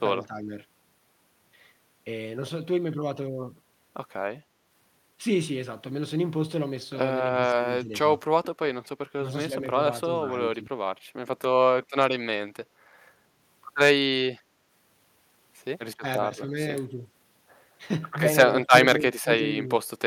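Speech dips briefly between 0.17 and 0.51 s, by roughly 10 dB. This is likely speech suppressed in double talk, with the echo canceller ducking the talker while the far end also speaks. From 4.44 to 4.64 s the background is gated by the echo canceller. Room sound drops about 6 dB for 0.2 s, then returns. The same speech suppression recurs at 7.51 to 7.93 s, 9.21 to 10.73 s, 16.0 to 17.02 s and 18.61 to 19.69 s. Drops run from slight to about 20 dB.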